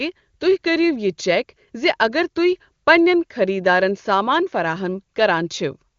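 No technical faults can be heard in the speech, which carries the bandwidth typical of an AMR wideband (HD Voice) codec at one of its higher rates.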